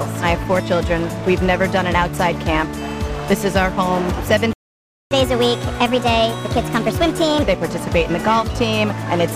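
Playback stall, 4.53 to 5.11 s: the sound cuts off mid-flow and the output stays silent for about 0.58 s before resuming. The likely cause is that the player's buffer ran dry or its playback thread was blocked, leaving nothing to send to the output until data arrived again. It is heard as an abrupt hole in the audio rather than a fade, with the sound picking up directly after the gap.

Catch-up at higher speed, 5.11 to 7.43 s: as soon as the stall ends, the audio runs at 1.25 times normal speed for about 2.3 s. The player is working through its backlog by resampling faster to win back the lost time, so tempo and pitch rise together, with pitch lifted by around four semitones. The result sounds hurried and audibly higher until, at 7.43 s, speed and pitch drop back to normal.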